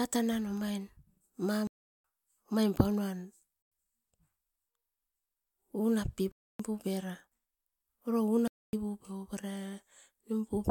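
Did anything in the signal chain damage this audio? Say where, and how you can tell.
Yes, at the driver or buffer stage: blocks of digital silence at 1.67–2.04 s (just before "omaim paunuam"), 3.62–3.72 s (just after "omaim paunuam"), 6.32–6.60 s and 8.48–8.73 s. The audio drops to nothing and returns with no fade. The waveform sits flat; the spectrogram shows empty full-height bands edged by thin broadband lines. The first two gaps fit 16384- and 4096-sample buffers left unfilled in time.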